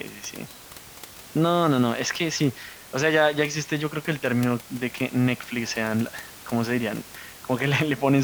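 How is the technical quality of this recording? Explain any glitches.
No technical faults are audible.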